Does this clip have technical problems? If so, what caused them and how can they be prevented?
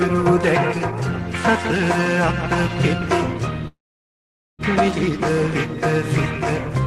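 Yes. A call audio freeze runs from 3.67 to 4.62 s: the last sound trails off briefly, then about 0.84 s of silence follows before the audio resumes where it stopped, with nothing lost but 0.91 s of added delay. Held-up packets draining the jitter buffer are the likely cause. A more stable network path or a larger adaptive jitter buffer would prevent it.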